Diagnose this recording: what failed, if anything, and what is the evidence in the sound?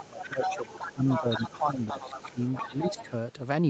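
The talker's speech dips from 0.0 to 1.98 s, 2.14 to 2.42 s and 2.65 to 3.12 s, by up to about 15 dB, while a second voice is present. This is likely speech suppressed in double talk at the call-processing stage. The echo canceller cannot separate the two and turns the near talker down. Unlike network dropouts, the dips follow the other voice rather than leaving clean gaps.

A second voice runs underneath from 0.0 to 3.09 s, about 10 dB below the main speech. It is probably the other side's voice leaking through, meaning loudspeaker playback that the echo canceller did not fully remove from the microphone. Room reverb would only smear the talker's own speech. This is a separate voice.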